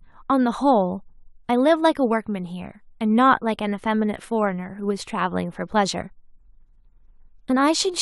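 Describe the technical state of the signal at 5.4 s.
At 5.4 s the speech signal is intact, with no fault present at that moment.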